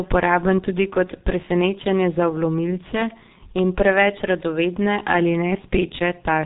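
G.723.1 codec damage runs through the whole clip: the speech has been squeezed through an early telephony coder, which fits a bitrate near 6 kbit/s. Nothing above 4 kHz survives, and the slowly updated voice model leaves the speech muffled and hoarse, with smeared consonants.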